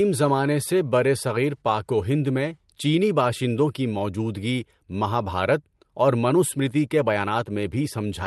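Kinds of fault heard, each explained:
Nothing here counts as a fault; the speech simply comes over a normal call path, with the top end tapering off around 12 kHz as that kind of link does.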